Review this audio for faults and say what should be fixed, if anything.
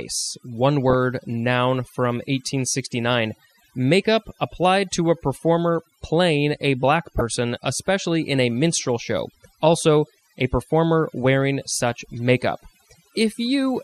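Throughout, the background drops and breaks up into twinkling specks. This is overdone noise removal: the suppression was set so strong that quieter parts of the speech were cut along with the noise.

Throughout, the speech is dull, with a gurgling, granular edge. The likely cause is MP2 compression at a low rate, consistent with about 80 kbps, which switches off upper sub-bands and coarsely quantises the rest.

At 0.90 to 0.95 s and 7.18 to 7.21 s, brief blips of noise burst over the speech. This is DAB burbling: a small rate of uncorrected reception bit errors corrupted the sub-band data for a few frames.

To prevent these, use gentler noise reduction, encode at a higher bitrate or with a more efficient codec, and capture the broadcast with stronger, more reliable reception.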